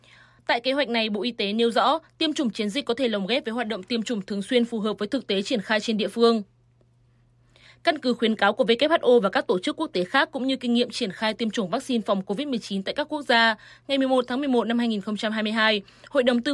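Nothing stood out on listening to this audio.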